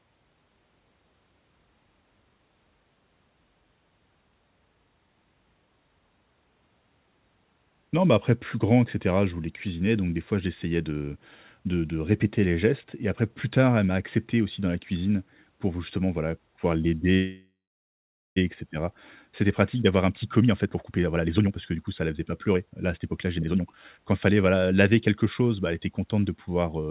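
Call audio freeze, 17.14 to 18.38 s: the sound stops and is stretched into a fading buzz or hiss that falls silent for about 0.8 s. It is likely that delayed packets emptied the jitter buffer. The speech then resumes where it stopped, so a 1.22 s gap was inserted and nothing is missing.

Jitter buffer speed-up, 19.26 to 25.42 s: the speech runs at about 120% speed with unchanged pitch and sounds hurried. The buffer held more audio than it aims for. The receiver then cut many short pitch-period pieces, removing about a second in total.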